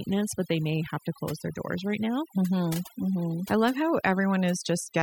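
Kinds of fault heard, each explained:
Overdone noise removal: Across the whole clip, the gaps between phrases drop to an unnatural near-silence scattered with chirping, glittering specks, and the speech loses its softer edges and breathy detail. The cause is a noise reduction process pushed too hard. It suppresses any frequency band that sits close to its noise estimate, so low-level parts of the speech are cut along with the background noise.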